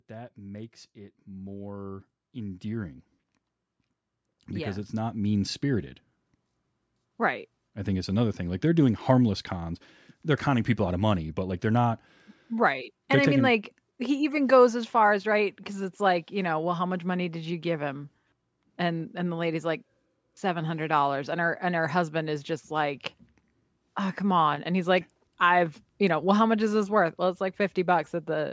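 From 0.07 to 9.79 s, automatic gain rising: the gain control judged the input too quiet and kept lifting it by about 16 dB, so speech and background swell together.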